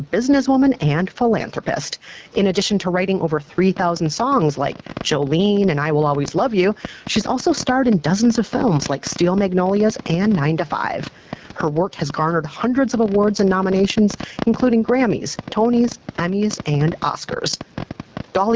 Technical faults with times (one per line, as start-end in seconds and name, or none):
0.00-18.55 gain pumping
0.00-18.55 AMR wideband (HD Voice) codec
3.77-18.51 train of clicks